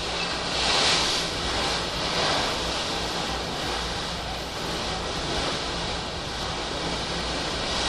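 Listening to this recording of sounds, nothing stood out as a technical problem.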